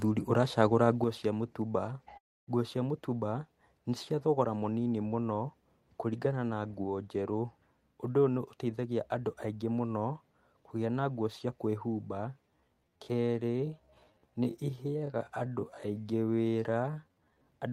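A sudden gain jump at 1.04 s drops the level of this speech recording by about 6 dB in a single step, and the lower level holds to the end of the clip. The speech and the background noise fall together, with no fade between the two levels, which points to a digital gain change applied from one sample to the next. The likely cause is a volume setting or bit shift that took effect instantly instead of being ramped. A long network dropout follows from 2.17 to 2.49 s. For roughly 0.3 s the sound gives way to a smeared continuation of what came just before it, which thins toward near-silence. About 300 ms of the recording never arrives, and the speech resumes beyond the gap with that portion simply missing. This most likely comes from a network stall long enough that the receiver's packet-loss concealment could only extend the last good audio briefly and then gave up. A time-stretched section runs from 12.32 to 17.48 s. 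Here the pace suddenly slows to about 0.66 times normal speed while the pitch stays where it was. The speech sounds drawn out, because short fragments are being repeated to lengthen it. This is likely software stretching the passage to fill a set duration while preserving its pitch.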